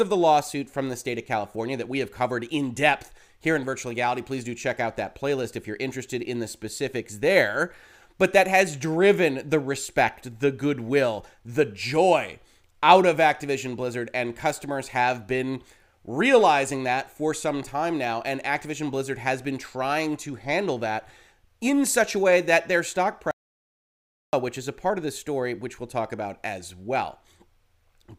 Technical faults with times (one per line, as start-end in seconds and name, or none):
23.31-24.33 audio dropout to silence